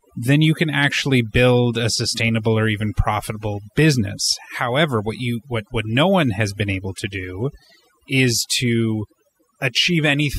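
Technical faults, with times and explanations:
Throughout, overdone noise removal: the speech was run through noise reduction pushed far too hard. Individual frequency bands sitting close to the estimated noise floor are cut deeply or dropped entirely, and softer parts of the speech fall below that threshold and are removed along with the noise. Between phrases the background collapses to near silence scattered with twinkling, chirpy specks.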